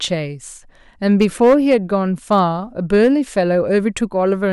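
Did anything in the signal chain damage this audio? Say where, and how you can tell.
Yes, hard clipping on the speech peaks, probably at the converter or a sample-format stage. It's harshest from 1.1 to 1.74 s (about 5 dB over), milder at 2.32 to 2.40 s (about 1 dB) and 2.94 to 3.08 s (about 3 dB). Flattened tops throw off high harmonics, hence that crackly fuzz.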